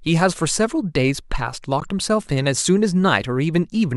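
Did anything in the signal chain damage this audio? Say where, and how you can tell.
Yes: a corrupt frame was decoded at the codec stage, from 1.80 to 1.86 s, heard as a brief glitch in the speech. Flipped bits gave the decoder wrong gains and codes across a few frames, consistent with roughly 20 ms frames. A spectrogram shows a 60 ms block of misplaced energy peaking near -20 dBFS.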